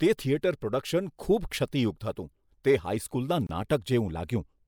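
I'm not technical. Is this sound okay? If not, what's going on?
No. At 3.47 seconds the speech drops out for about 25 milliseconds. This is a gap at a join of encoded pieces, where separately encoded parts meet with silence left in.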